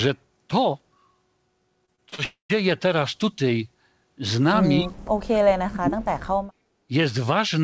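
Speech carried over a wideband call path, with nothing above 8 kHz, which fits a G.722 codec at 64 kbps. From 1.86 to 2.20 s there is repeated packet loss with a robotic sound. Four short gaps, the longest 23 ms, are each bridged by stretching the preceding waveform, so about a quarter of that span is synthetic fill. The speech turns choppy, with small pieces dropped between the patches. Straight after, from 2.24 to 2.51 s, comes what is likely a long network dropout. The receiver extends the last sound for roughly a quarter of a second as a decaying buzz, and the final 120 ms or so falls to silence. The speech then resumes with that portion simply gone rather than delayed. Two dips in level point to speech suppressed in double talk, likely an echo canceller clamping down while far-end audio was playing and it could not tell the local talker from the echo. The first, from 4.81 to 4.92 s, is brief and shallow, around 15 dB for about a tenth of a second. 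The second, from 5.31 to 6.04 s, is much heavier, dropping the speech by roughly 40 dB over about 0.7 s, so it is nearly cut out. From 6.54 to 6.83 s the background is gated by the echo canceller. The room tone is pulled down by about 9 dB for roughly 0.3 s while the loudspeaker is active, and it comes back when the canceller releases.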